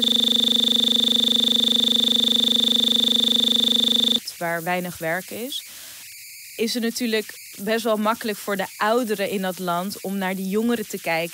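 Right from the start the clip is caught in a system hang loop that's already running: a 40 ms scrap of speech repeats exactly, around a hundred times, so you get a steady 25 Hz buzz until 4.18 s, when it frees up just before "waar weinig werk is".

Underneath the whole thing there are converter idle tones. The delta-sigma converter, with no dither, settles into repeating bit patterns on the quiet parts, giving a tone around 2 kHz in the pauses and grainy noise about 14 dB below the speech.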